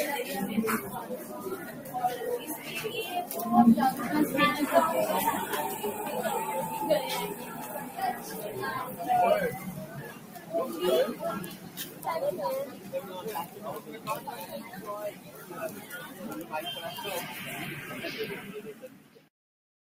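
Throughout, the sound pumps and thins, with held and fading parts sinking while sharp onsets stay fairly intact, a level swing of about 10 dB. This is a noise suppressor applied to sounds, built for speech, treating steady tones and tails as noise and pulling them down.

Sound cut by the noise suppressor occurs at 1.03–1.94, 7.34–8.31, 9.59–10.51, 11.49–12.05, 12.71–13.11, 13.45–14.07, 15.12–16.17 and 18.74–19.29 s. In each span, sustained sound sags by about 6 to 7 dB, or its decay is cut short, because the suppressor judged it noise.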